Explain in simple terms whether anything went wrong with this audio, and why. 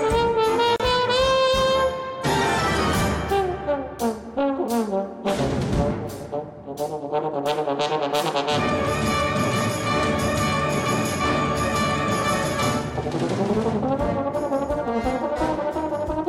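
Right near the start, from 0.76 to 0.80 seconds, the sound briefly drops out into a short silence of about 36 milliseconds, then picks up exactly where it left off. This is a gap at a join of encoded pieces: separately encoded sections were stuck together without trimming their built-in padding.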